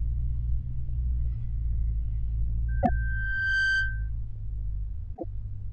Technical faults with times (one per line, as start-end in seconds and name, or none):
2.68-4.10 loudspeaker feedback squeal
2.81-2.89 repeated frames
5.13-5.24 repeated frames